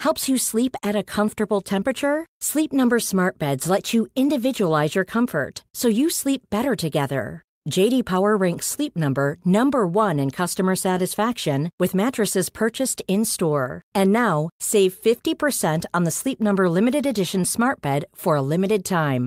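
No faults turn up anywhere in this bit of speech, so there's nothing to flag from the beginning right through to the end.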